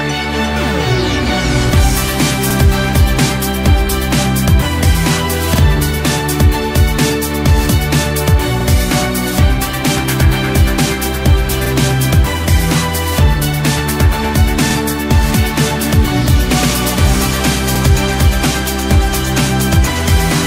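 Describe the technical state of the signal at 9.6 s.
At 9.6 s the audio is intact, with no dropout, distortion, glitch or other fault to be heard.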